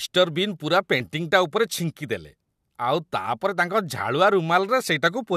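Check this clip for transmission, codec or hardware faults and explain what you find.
One fault occurs: damaged data in the compressed stream at 1.0 s, just after "ବିନ୍ ପୂରା". Corrupted frames force the decoder to resynchronise, producing a brief glitch in the speech.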